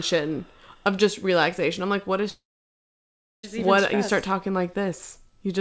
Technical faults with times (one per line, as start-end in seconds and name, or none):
2.30-3.44 long network dropout